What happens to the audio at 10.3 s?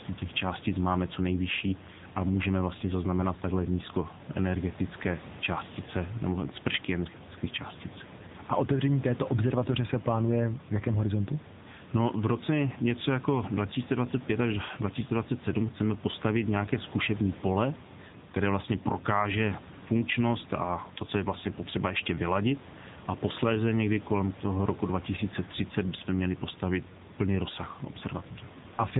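At 10.3 s the speech carries AMR narrowband mobile codec damage, as it does for the whole clip. The codec rebuilds the voice from a vocal tract model, a pitch predictor and a few pulses every 5 ms. Nothing above 3.8 kHz survives, so the sound is muffled. The damage is plainly audible, which fits a low bitrate of around 8 kbps. The voice sounds buzzy and synthetic. The room noise, about 17 dB below the speech, turns into a swirling warble.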